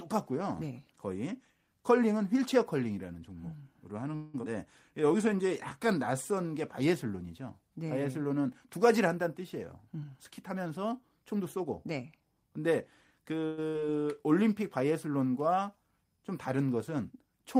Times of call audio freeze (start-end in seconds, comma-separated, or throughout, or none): 4.15-4.36, 13.46-13.59